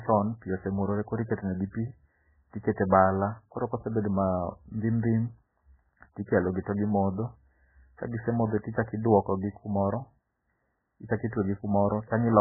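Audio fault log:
throughout: MP3 compression. The speech has nothing above 2 kHz and sounds heavily watery and swirly, with quiet detail flickering between frames and smeared attacks. The likely cause is an MP3 encoder starved of bits, fitting roughly 8 kbps, cutting treble and discarding weak frequency lines.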